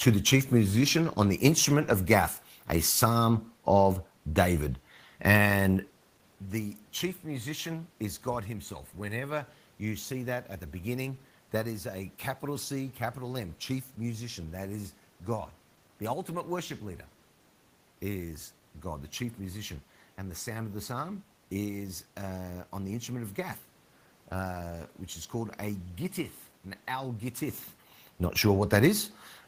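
No technical faults are audible.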